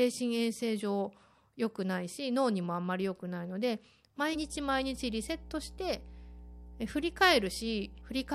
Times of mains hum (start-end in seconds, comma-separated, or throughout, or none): 4.34-8.34